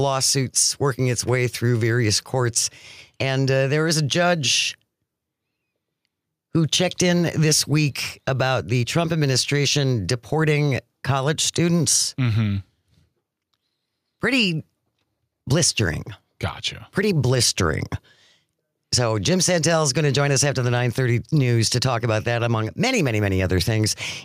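Gain pumping throughout: the level ducks by about 5 dB under loud sounds, likely excessive gain driving a fast limiter, squashing dynamics.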